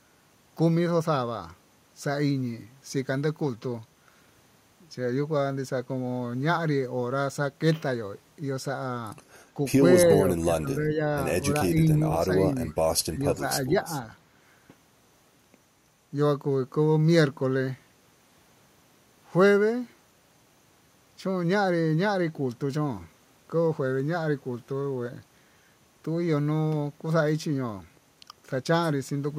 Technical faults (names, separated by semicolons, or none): speech suppressed in double talk